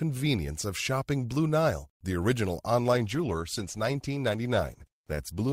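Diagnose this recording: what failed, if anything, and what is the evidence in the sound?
The adaptive stream switched to a lower bitrate, a network-stage fault expressed through the codec. Just after "the original", at 2.91 s, the speech takes on stronger codec artefacts that last to the end of the clip. The change is abrupt but seamless, which fits a switch from Opus at 64 kbit/s to 16 kbit/s. Packet loss would leave gaps or concealment warbles, and a plain low-pass filter would lack the synthetic artefacts.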